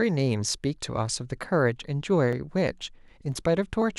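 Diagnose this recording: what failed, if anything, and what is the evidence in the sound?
Regular ticks every 0.5 s from 1.83 to 3.82 s in the speech: periodic USB or driver dropouts, each skipping roughly half a millisecond of audio.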